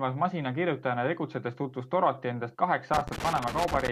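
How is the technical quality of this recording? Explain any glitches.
The recording has one clear fault: loose connector crackle from about 2.94 s through to the end of the clip at 3.91 s. For that final second, a worn or dirty contact somewhere in the signal chain is repeatedly making and losing connection, so the speech is chopped into fragments and any DC present on the line turns each break into a pop. The result is an irregular, scratchy burst of crackle over the last part of the speech.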